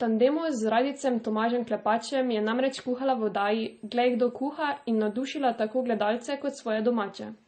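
Transcoding between lossy codecs runs through the whole speech clip. Nothing sounds above 8.7 kHz, and two different kinds of coding damage are layered over each other: the smeared, warbly texture of MP3 and the synthetic, hissy top end of HE-AAC's spectral band replication. The likely cause is a chain that fits MP3 at 32 kbit/s re-encoded to HE-AAC at 32 kbit/s, where the second encoder wasted bits copying the first one's artefacts.

USB whine enters at 3.36 s and stops at 6.13 s. It is a steady, fixed-pitch tone at 8 kHz, faint at roughly 40 dB below the speech, and it sits just under the 8.7 kHz ceiling, so it stays audible. The 8 kHz pitch matches the bus's 125 microsecond microframe rate. The bus's current draw leaks through shared power or ground into the analogue path for as long as the bus is busy.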